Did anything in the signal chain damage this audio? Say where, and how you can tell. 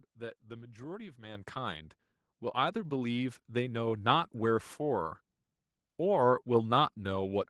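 Yes. At 1.35 s the microphone volume stepped up: the whole speech signal and the room noise under it jump by about 8 dB at once and stay there. That's call processing, not the mic or cabling. The call software decided the input was too quiet and raised the device's input gain in a single step. You can tell because the background rises right along with the voice, with no fade.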